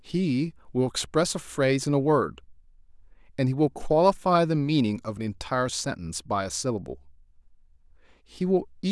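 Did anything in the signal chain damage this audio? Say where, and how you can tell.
No, nothing in the signal chain damaged this speech.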